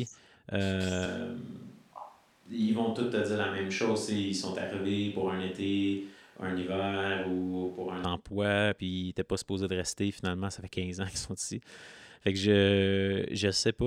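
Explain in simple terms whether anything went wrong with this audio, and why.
From 1.06 s, just before "emploi puis ils n'étaient", to 8.04 s, the speech suddenly turns roomy and hollow, loses some of its bass, drops to a lower level and carries more of the room's background noise. At 8.04 s it snaps back. This is likely a switch to a distant microphone. The close microphone's signal dropped out or wasn't used, so for those seven seconds the recording relied on a microphone farther from the speaker, which picks up more of the room.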